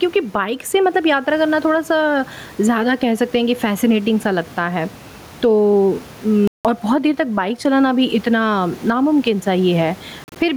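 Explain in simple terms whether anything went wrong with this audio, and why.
Two things went wrong. The first is gain pumping, all the way through. Loud and soft parts end up closer in level, and the sound is squashed. That's likely the input gain set far too high with a fast limiter yanking it back down on every loud bit.

The second is Bluetooth dropout, twice. At 6.47 s the sound cuts out cleanly for about 170 ms, then picks up further along, as if it had kept playing underneath. That's likely audio packets not reaching the headphones in time. Around 10.24 to 10.36 s there's a stutter of short gaps, the longest about 40 ms.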